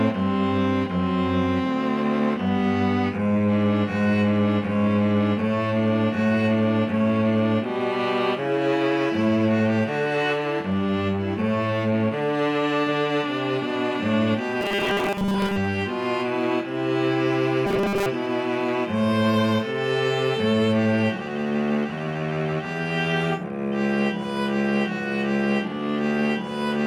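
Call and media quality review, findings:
Robotic sound from repeated short buffers, 14.61–15.57 s and again 17.66–18.06 s: rigid metallic buzz locked at 200 Hz over the audio, contour still loosely tracking the original. Likely cause: jitter buffer or playout underrun, with the player looping the last 5 ms block, which sets the 200 Hz buzz, while fresh audio is skipped. Most of each span, roughly two-thirds or more, is repeated material rather than real signal.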